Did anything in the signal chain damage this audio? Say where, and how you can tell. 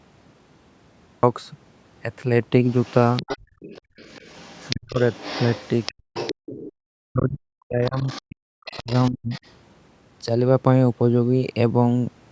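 Yes. Recording or storage: a cut-off start, with digital silence until 1.23 s, then sound begins abruptly mid-signal with no attack, because capture began late.

Call processing: the other side's voice leaking through at 2.66–6.72, 7.85–8.22 and 8.66–9.51 s, about 15, 20 and 25 dB below speech, likely residual echo the canceller missed.

Call processing: background gated by the echo canceller, with room sound dipping about 24 dB at 3.38–3.97 s and about 40 dB at 5.94–6.75 s.

Call processing: speech suppressed in double talk at 4.72–4.99 and 7.03–9.33 s, dropping roughly 35–40 dB, likely the canceller attenuating everything while both sides spoke.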